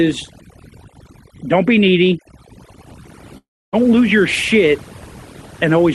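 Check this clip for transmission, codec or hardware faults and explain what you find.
Two faults are audible in this speech clip: heavy processing throughout and one gap in transmission.

Throughout, the background is near-silent and twinkling. This is overdone noise removal: bands near the noise estimate were cut, taking quiet speech with them.

From 3.37 to 3.76 s, just before "lose your shit", the audio smears into a fading buzz or hiss, then goes quiet. This is likely a long network dropout: about 360 ms of audio never arrived, and concealment filled the gap.

The call codec path contributes its own coding texture, with the top end ending around 12 kHz.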